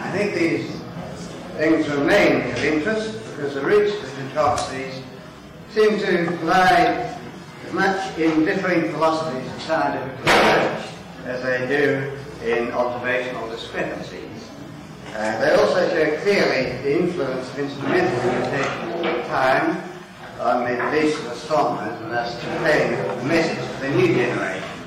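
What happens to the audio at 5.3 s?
At 5.3 s the peaks break up into a harsh, crackling fuzz, as they do throughout the clip. This is hard clipping: the signal is driven about 12 dB past what a stage can pass, so around 2 percent of samples are cut flat, adding high harmonics.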